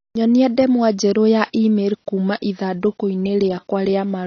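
AAC compression damage runs through the whole of this speech clip, from start to finish. The sound is dull and band-limited, with nothing above about 6.6 kHz, and the damage is plainly audible as a smeared, warbling texture on sustained sounds and a fizzy edge on sibilants. The likely cause is AAC-LC coding at a low bitrate, around 27 kbps, where the encoder lowers its cut-off and quantises the remaining frequency lines coarsely.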